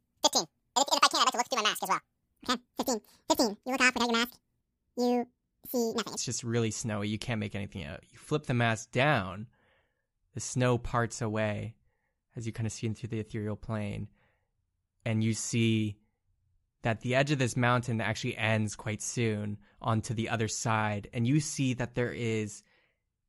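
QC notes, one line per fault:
0.00–6.17 s, wrong sample rate: the speech runs at double speed and sits a full octave (12 semitones) high, so it sounds squeaky and hurried. Because speed and pitch rise together by exactly 2x with no change in timbre beyond the shift, the samples are being clocked out at twice their intended rate without resampling. This fits material captured at 24 kHz being played back at 48 kHz.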